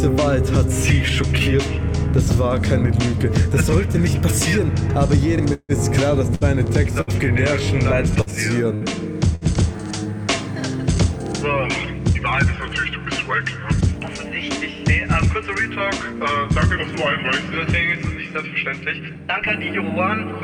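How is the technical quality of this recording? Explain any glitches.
The recording has clear network faults, all bunched between about 5.5 and 9.8 s.

Call audio freeze, 5.53 to 5.72 s. The last sound is held as a fading buzz or hiss for about 155 ms, with roughly 40 ms of silence. Then the audio resumes where it stopped. The likely cause is delayed packets draining the jitter buffer. Nothing is lost, but everything after arrives about 155 ms later.

Short stall from a late packet, 6.35 to 6.44 s. One packet arrived late. The receiver stretched the previous sound for about 60 ms until it came. You hear a sound held slightly too long, with a faint buzz or dip. No audio is skipped.

Burst of packet loss, 7.01 to 7.10 s. About 60 ms of consecutive audio never arrived in time. The receiver extended the last sound and faded it over roughly 63 ms. Then playback jumps ahead. The section in between is simply gone.

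Repeated packet loss (robotic sound), 8.21 to 9.81 s. Four separate gaps fall in this stretch, the longest about 66 ms. Each is patched by repeating the last sound. About 180 ms goes missing in total, and roughly 12% of the span is concealed. The result sounds choppy, with pieces missing.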